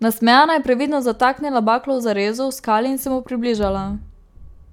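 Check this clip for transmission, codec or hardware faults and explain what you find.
No faults turn up anywhere in this speech recording. There is nothing here that needs explaining.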